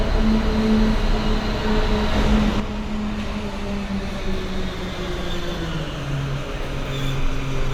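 At 2.6 s the level drops suddenly by about 7 dB and stays down until the end of the clip. This is a sudden gain jump. The everyday sound and its background noise fall together, in a single step. There is no fade between the two levels. The likely cause is a digital gain change applied from one sample to the next without a ramp, such as a setting change or a bit shift.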